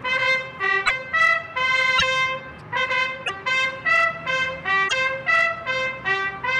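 At 0.85–0.91 s, 1.97–2.03 s, 3.25–3.30 s and 4.87–4.93 s the audio skips ahead with a brief garbled patch, about two 26.1 ms frames each. That's likely a broken MP3 bit reservoir, where frames after a cut pull their data from the wrong bytes.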